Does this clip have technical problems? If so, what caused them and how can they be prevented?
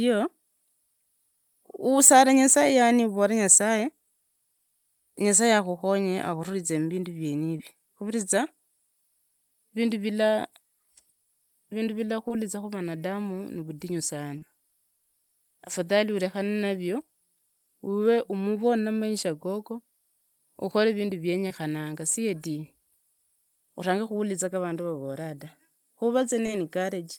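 Yes. Five brief smears or wobbles interrupt the speech at 7.58–7.60, 12.28–12.31, 14.38–14.42, 21.47–21.51 (just after "ukore vindu") and 26.46–26.49 s. Each is short concealed packet loss. Between 10 and 30 ms of audio arrived too late or not at all. The receiver extended the preceding sound across each gap and then blended back into the real signal. A larger jitter buffer, forward error correction or packet redundancy, and a steadier network path would prevent these dropouts.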